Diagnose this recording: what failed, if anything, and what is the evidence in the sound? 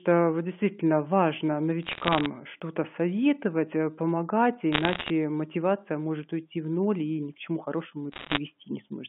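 Bit errors on a digital phone line, at the transmission stage of the G.711 mu-law link. Bursts of sharp ticks and crackle run at 1.83–2.26 s after "вот действительно важно", at 4.72–5.10 s before "мотивация может уйти в", and at 8.12–8.38 s after "ни к чему хорошему", each denser than the last. A flipped sign or high bit throws one logarithmic sample far off. Unlike packet loss, nothing drops out; the speech continues intact beneath.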